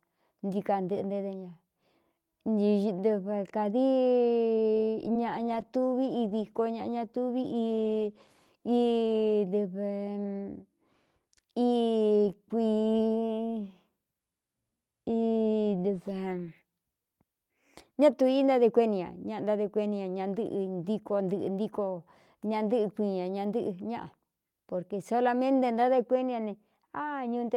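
At 4.85 to 4.89 s there is a short stall from a late packet. A packet arrived behind schedule, the jitter buffer ran dry, and the receiver held the last sound for about 18 ms until the data came in, then carried on from the same point. Nothing is lost, but the sound hangs a moment too long with a faint buzz or dip, and everything after it runs about 18 ms later. Unlike a real loss, no sound is skipped.

At 5.13 to 5.17 s comes a short concealed packet loss. About 20 ms of audio never reached the decoder in time, and the receiver bridged the gap by extrapolating the preceding sound for about 17 ms before blending back into the real signal. The result is a brief smear or wobble. What separates it from the stall just before it is that the original audio in that gap is gone for good, rather than held and resumed without loss.

From 5.48 to 9.42 s there is a call bitrate drop. The bandwidth estimate fell, so the encoder went from 32 kbps to 16 kbps and stayed at the lower rate for about 3.9 s. 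At that rate Opus codes more coarsely and narrows the audio band from 20 kHz to 12 kHz, so the top end dulls and the sound turns rough, watery or muffled. It differs from the packet faults because it is a sustained change in tone lasting seconds, not a momentary glitch.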